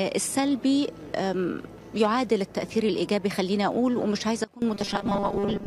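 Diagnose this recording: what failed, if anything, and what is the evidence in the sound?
From 4.44 to 4.62 s, sound and noise drop abruptly together by about 20 dB. This sudden gain jump is likely an unramped digital gain step in call processing.

From 4.74 s to the end, the sound turns into a rigid, metallic 200 Hz buzz. This robotic sound from repeated short buffers likely comes from a starved driver buffer re-looping 5 ms chunks, which skips most of the real audio.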